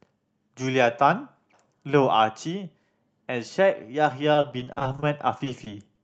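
From 4.33 s to 5.99 s, repeated packet loss (robotic sound) occurs: more than a dozen short dropouts, the longest about 40 ms, are each patched by stretching the preceding sound. Roughly a fifth of that span is filled in, so the speech turns choppy, with small pieces missing.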